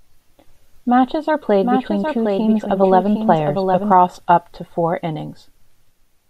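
From 1.62 s to 3.92 s the speech carries a doubled audio track. A second full-band copy trails the original by about 0.7 s, roughly 5 dB quieter. It has no decay or room colour. It starts and stops abruptly. Likely a slower capture path recording twice.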